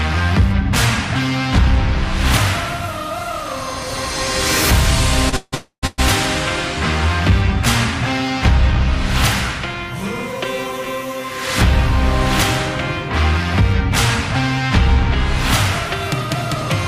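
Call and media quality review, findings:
Short stall from a late packet, 5.29 to 5.34 s: last sound held about 30 ms, jitter buffer briefly empty, then resumes in place; nothing dropped, unlike a loss gap.

Call audio freeze, 5.36 to 5.54 s, 5.54 to 5.85 s and 5.87 to 6.00 s: fading buzz into silence of up to 90 ms, then resumes where it stopped; likely delayed packets draining the jitter buffer, longer than the stall.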